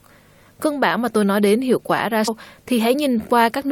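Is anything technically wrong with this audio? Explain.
Yes. At 2.27 s there is a brief glitch. This is damaged data in a compressed stream: corrupted bytes made the decoder misread a frame, lose sync and skip ahead to the next valid frame header.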